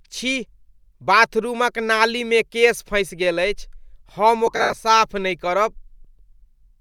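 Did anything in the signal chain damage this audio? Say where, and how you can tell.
Yes. Lost LE Audio frames on the Bluetooth link between 4.47 and 4.77 s: the LC3 decoder concealed about 170 ms of gaps, in runs up to roughly 70 ms, turning the speech into a noisy smear.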